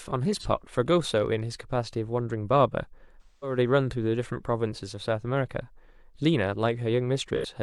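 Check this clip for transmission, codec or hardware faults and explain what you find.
The speech has AAC frame loss with concealment three times, at 0.39–0.46 s, 3.22–3.58 s and 7.36–7.46 s. Missing frames are rebuilt from the last good spectrum. The brief 43 ms and 85 ms gaps come out as smeared, noisy patches. The 213 ms gap near 3.2 s, which fits several consecutive frames, sags and recovers.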